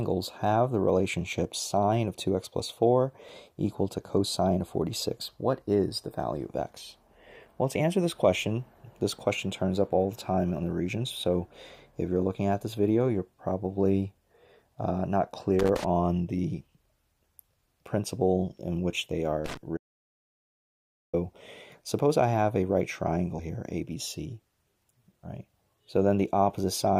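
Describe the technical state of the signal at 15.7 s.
At 15.7 s the signal is broken up by loose connector crackle, running from about 15.59 to 15.84 s. A worn or dirty contact is making and breaking repeatedly as it shifts, so the signal is chopped on and off, giving a quarter-second burst of irregular scratching. On a waveform this shows as jagged dropouts; on a spectrogram, as scattered broadband vertical streaks across that span.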